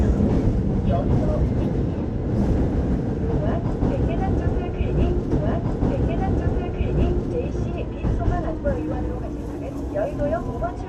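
At 5.31 s the audio jumps back and replays a stretch, so the two seconds up to 7.31 s are heard a second time. This is a stream segment repeated: the player fetched or queued the same chunk twice, adding 2.0 s to the running time. A small blip marks the jump back. Unlike a buffer stutter, which loops a few milliseconds into a buzz, this replays a whole recognisable passage once and then carries on.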